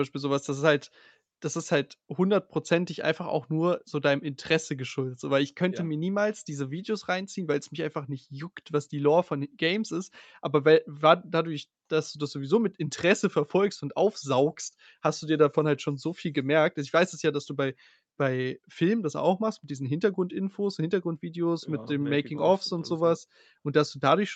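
No technical faults can be heard anywhere in the speech. Its content stops at 8 kHz, which fits a wideband Opus call path and the call's microphone processing working as they normally do.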